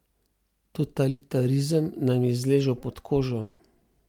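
Burst of packet loss at 1.09 to 1.23 s: about 120 ms of speech never arrived, so the last sound is stretched and fades before the speech resumes further on.

A long network dropout is the likely cause at 3.41 to 3.61 s, where roughly 180 ms is missing, bridged by a fading continuation of the preceding sound rather than silence.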